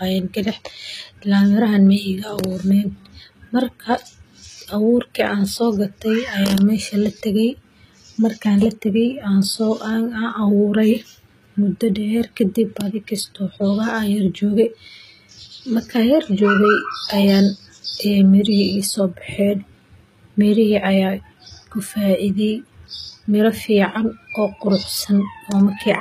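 From start to end, the speech carries plainly audible HE-AAC compression, likely at a low rate near 20 kbps. Treble is rebuilt from copied lower bands, not coded. Sibilants turn gritty and lispy. Nothing remains above 14.9 kHz.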